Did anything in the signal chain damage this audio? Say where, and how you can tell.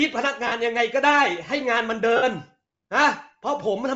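Yes, at the codec stage, throughout the clip. The upper range of the speech carries a plainly audible breathy, grainy edge. On a spectrogram, the high band looks patchy, with blocks of flat noise where harmonic detail should be, changing in short time steps. This is likely Bluetooth LC3 compression, working at a low rate of around 32 kbps with 7.5 ms frames. It zeroes much of the upper spectrum and fills the gaps with noise.

There is also damage on the wireless link, heard as lost LE Audio frames at 0.47 to 0.52 s (45 ms) and 2.16 to 2.23 s (60 ms), which fits runs of six and eight 7.5 ms frames. At each spot the speech briefly turns into a noisy smear. On a spectrogram, the harmonic lines blur into a diffuse band, and the waveform envelope sags. The decoder replays the last good spectrum with scrambled signs, then fades it as the loss continues.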